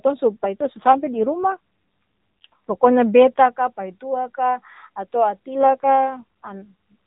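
Speech over a narrowband mobile link shows an AMR rate drop from 0.44 to 2.92 s and again from 5.56 to 6.72 s. The voice turns rougher and buzzier, consistent with the codec stepping down from 12.2 to 5.9 kbps. On a spectrogram the band stays capped at 4 kHz with no gap, but harmonics look coarser and smeared.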